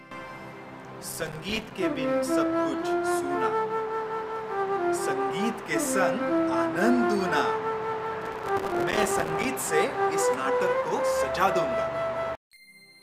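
Two bursts of processor overload crackle, from 1.02 to 1.71 s and 8.22 to 9.45 s, where missed deadlines on tiny buffers of around 3 ms leave dozens of silent gaps, heard as gritty tearing.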